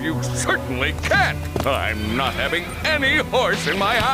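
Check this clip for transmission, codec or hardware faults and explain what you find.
One fault runs through the whole clip: low bit depth without dither. A grainy distortion tracks the sound and grows harsher as it quietens, with the error roughly 25 dB below the signal. The likely cause is rounding to about 6 bits without dither. The waveform shows visible stair-steps, and the spectrogram shows broadband hash that rises and falls with the signal.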